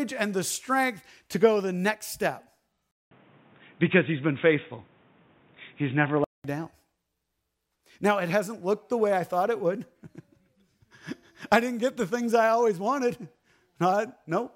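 At 2.91 s the speech drops out for 200 ms, then returns dull and boxy. Nothing above 3.8 kHz survives, so consonants lose their edge. The level shifts by about 5 dB, and new background noise appears, well below the speech. At 6.44 s the full, clear sound comes back. This is an input switched to a poorer device, likely a change to a narrowband microphone or a headset's call profile.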